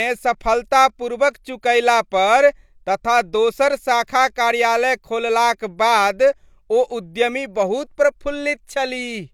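Nothing in the speech recording stood out as a technical problem on listening.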